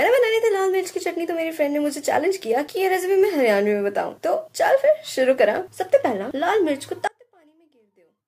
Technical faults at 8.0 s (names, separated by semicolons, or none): one channel inverted